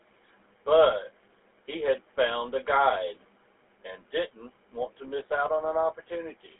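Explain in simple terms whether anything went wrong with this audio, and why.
From start to finish, the speech has gone through the GSM full-rate codec, an early mobile phone coder. It rebuilds the voice from simple, evenly spaced pulses. That makes it sound plainly buzzy and gravelly. Nothing above about 3.8 kHz gets through, so it sounds muffled.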